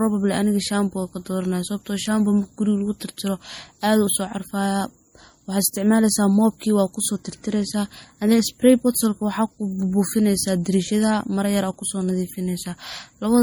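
Throughout the speech, transcoding between lossy codecs likely occurred, MP3 then AAC-LC at rates fitting 48 and 64 kbit/s, so both codecs' smeared, watery artefacts sound together.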